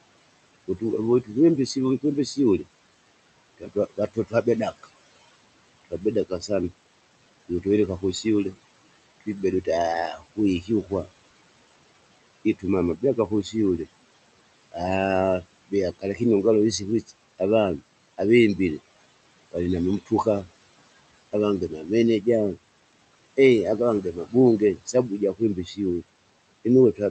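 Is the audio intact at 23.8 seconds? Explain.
No. Speech cut by the noise suppressor runs from 12.59 s to the end of the clip, so 23.8 s falls inside it. The suppressor is mistaking part of the speech for steady background and turning it down with the noise, by as much as about 19 dB at its deepest. Quieter consonants, word endings and softer stretches come out faint or swallowed rather than clearly formed.

Noise suppressor artifacts are also present at this moment, as they are throughout. Working band by band and frame by frame, the suppressor pulls the room noise down by about 19 dB in the gaps but lets it come back up underneath the speech, so the background pumps in and out.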